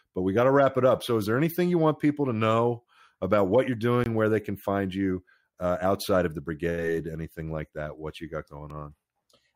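A short hole sits between "know about what you're" and "where they can find", from 4.04 to 4.06 s. A single tick follows at 8.70 s, just after "you got". Both are a block of digital silence: a run of samples replaced by zeros, about 20 ms in the first case and under 2 ms in the second. The audio drops straight to zero and jumps back with no fade.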